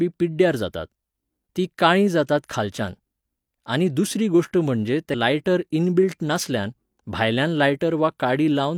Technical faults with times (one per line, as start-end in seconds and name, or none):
5.10-5.15 compressed frames skipped